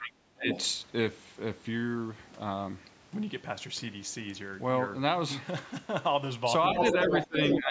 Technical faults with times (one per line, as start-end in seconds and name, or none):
0.00-0.49 speech suppressed in double talk
0.50-0.65 other side's voice leaking through
6.70-7.59 other side's voice leaking through
7.09-7.71 speech suppressed in double talk